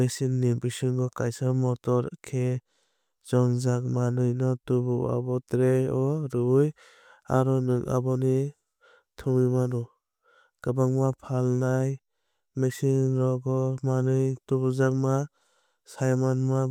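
Nothing technically wrong turns up anywhere in this bit of speech, so there's no problem here to point to.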